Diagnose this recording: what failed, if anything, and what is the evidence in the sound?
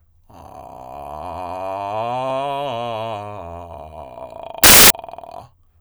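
The failure is in sample-format conversion: samples were built from the wrong bytes between 4.64 and 4.90 s. The music gives way to loud, harsh broadband noise for about 0.27 s, because misassembled bytes turn the rapidly changing low bits into the dominant part of each value.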